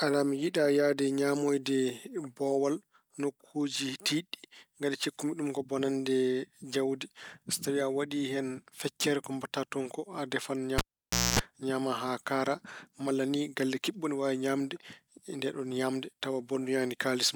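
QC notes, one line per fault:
10.78–11.39 s, cable pulled and plugged in: a pop at 10.78 s as a live connection breaks, then about 0.56 s of near silence while the signal path is open. On reinsertion, only the plug tip touches first, so the ungrounded input picks up 60 Hz mains hum as a harsh buzz lasting about 0.25 s. A second pop follows as the contact seats fully and the sound returns at 11.39 s.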